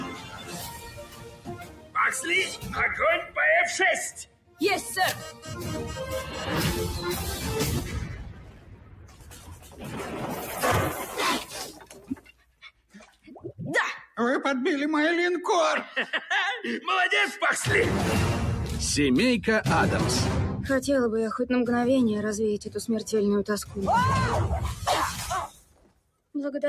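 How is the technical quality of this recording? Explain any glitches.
The quality suffers from a speech-oriented noise suppressor that stays active on material it wasn't built for. Its gain keeps moving through the whole clip, and several passages are pushed down hard.

A noise suppressor applied to music or sounds runs for the full length. It reads steady tones, room ambience and reverb as background noise and keeps lowering them, with its attenuation swinging by roughly 15 dB. Onsets mostly slip through while sustained parts and tails sag, so the audio pumps and flutters and sounds thinner than it should.

The sound is cut by the noise suppressor more heavily at eight points: 0.00–1.96 s (about 16 dB down), 2.48–2.77 s (about 11 dB), 3.22–3.38 s (about 13 dB), 4.11–4.61 s (about 16 dB), 5.31–5.52 s (about 9 dB), 7.81–10.59 s (about 16 dB), 10.99–13.52 s (about 16 dB) and 25.47–26.59 s (about 16 dB). 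In each span the suppressor judged the sound to be noise and clamped it. Held or decaying material sinks or is cut off early, leaving audible dips and truncated tails.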